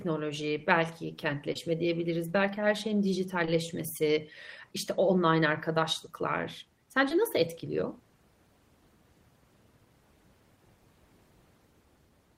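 At 1.53 to 1.57 s, just before "diyebiliriz belki her şeyin", the speech briefly smears and wobbles for a few hundredths of a second, as if the preceding sound were stretched over a tiny gap. This is short concealed packet loss. Part of the call reached the decoder too late to play, so the receiver extended the last sound from its pitch or as shaped noise across that short hole, then blended back into the real audio.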